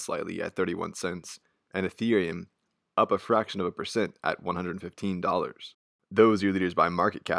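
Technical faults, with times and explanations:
Nothing technical jumps out anywhere in this speech recording, so there's nothing to list here.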